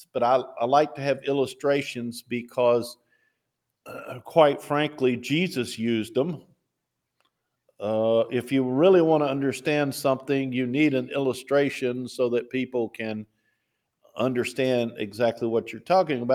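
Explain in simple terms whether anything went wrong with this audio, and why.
Sound cut by the noise suppressor, from 2.95 to 3.24 s and from 13.25 to 13.46 s: the suppressor mistook real sound for noise and briefly turned it down sharply.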